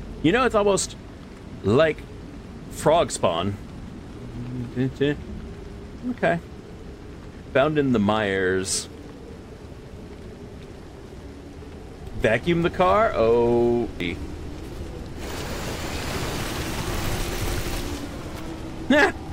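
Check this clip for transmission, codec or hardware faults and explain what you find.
One fault is present. At 14.00 s there is damaged data in the compressed stream. A stretch of the encoded bytes is corrupt, so the decoder loses sync and hunts for the next valid frame header. The result is a chirp, squawk, click or short hole.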